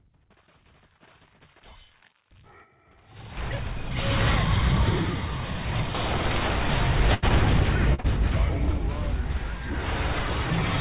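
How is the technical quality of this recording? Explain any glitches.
The recording has a cluster of network dropouts between roughly 7.1 and 8.1 s. It passed through a narrowband call path with nothing above 4 kHz, which fits G.711 mu-law at 64 kbps.

Burst of packet loss, 7.14 to 7.24 s: about 80 ms of audio never arrived. The receiver kept extending the last sound it had for about 83 ms, lowering its level as the gap went on, so you hear a held buzz or fading hiss. The audio then jumps ahead, and that stretch is gone.

Short concealed packet loss, at 7.28 to 7.32 s, 7.94 to 8.00 s and 8.00 to 8.06 s: brief holes of about 20 to 40 ms were patched by continuing the preceding sound's pitch or noise and cross-fading back into the real signal. The last two run back to back, giving roughly 80 ms of patched audio. These come across as short smears or wobbles, and a brief sound inside a gap can disappear.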